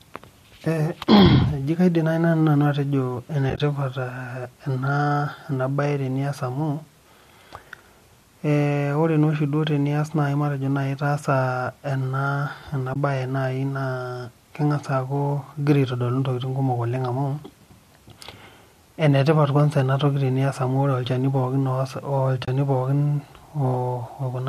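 At 3.50 to 3.60 s, 12.94 to 12.96 s and 22.45 to 22.48 s there's AAC frame loss with muting: lost frames were zeroed, so the speech fades into brief, soft-edged holes. The light grain underneath likely comes from low-delay AAC compression.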